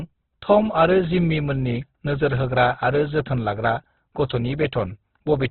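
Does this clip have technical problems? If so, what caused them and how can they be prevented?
Yes. Throughout the speech, everything above about 4.2 kHz is gone and tones sound rough and grainy, which is likely Opus compression at a very low rate, around 12 kbps, squeezed to narrowband with noise-filled bands. Encoding at a higher bitrate would prevent it.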